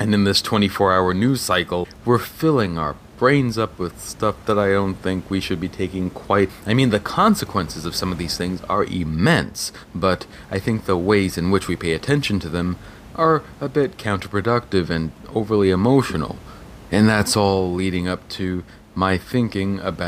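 No system faults in the speech; the only background is room noise about 22 dB below it, which belongs to the recording space rather than the signal chain.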